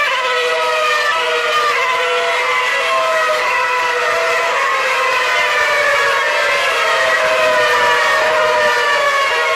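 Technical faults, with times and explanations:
1.07–1.13 s compressed frames skipped: about four 46.4 ms frames never play, so the sound jumps ahead by about 200 ms.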